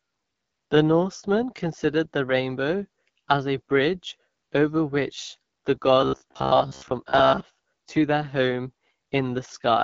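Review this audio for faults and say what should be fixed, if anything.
Throughout the speech there is a rough, raspy grain, and nothing reaches above about 7.3 kHz. That is the AMR wideband (HD Voice) codec running at 8.85 kbit/s, one of its lowest rates. It models the voice with a pulse-excited vocal tract filter up to 6.4 kHz and fills the band above that with shaped noise, so the harshness is plainly audible. Sending the call at 12.65 kbit/s or higher would prevent it.

From 6.01 to 7.40 s, just after "bridge over which the" and ending before "to their home", the voice turns into a rigid metallic buzz near 66.7 Hz. It still roughly follows the speech. This is robotic sound from repeated short buffers, likely caused by audio arriving too seldom while the player loops the last fragment to fill the gap. A 66.7 Hz buzz fits a repeat of about 15 ms. Roughly 70 percent of that stretch is repetition rather than new audio. 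A larger jitter buffer or steadier delivery to the playback device would prevent it.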